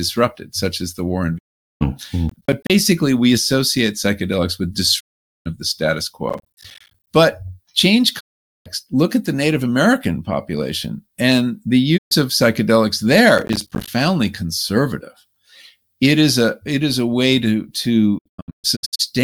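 At 1.37 to 1.83 s the speech drops out for about 0.42 s. This is a digital broadcast dropout: the receiver lost valid frames and muted, with a 20 ms fade. The waveform shows a flat gap and the spectrogram a blank column.

From 2.29 to 2.70 s a processor overload crackle tears through the sound. Missed deadlines on buffers of roughly 10 ms leave tiny silent holes with hard edges. These appear as dense vertical broadband streaks and waveform notches.

Dropouts recur at 4.99 to 5.48 s and 8.19 to 8.68 s. Crackle returns at 6.29 to 7.07 s, between those two dropouts. A short dropout follows at 11.96 to 12.13 s, then crackle at 13.38 to 13.88 s. Finally, 18.17 to 19.04 s breaks into scattered holes, the longest about 0.13 s.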